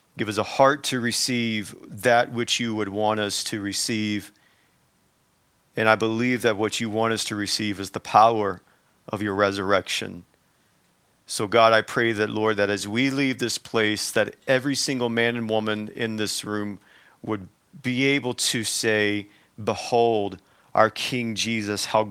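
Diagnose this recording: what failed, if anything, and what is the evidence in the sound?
Nothing failed in this speech recording. No stage from capture through to playback leaves an audible fault, so there is nothing to diagnose.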